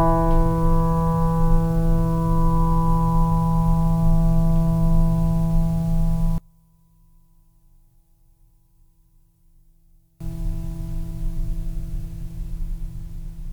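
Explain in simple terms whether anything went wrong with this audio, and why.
From 6.38 to 10.20 seconds, the music nearly vanishes, leaving only a faint trace. The likely cause is one channel inverted. One stereo side is flipped upside down, so when both sides are combined, the shared sound cancels itself out.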